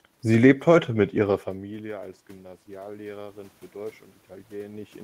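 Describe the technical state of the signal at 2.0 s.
At 2.0 s the speech signal is intact, with no technical fault audible beyond the ordinary background noise of the room it was recorded in.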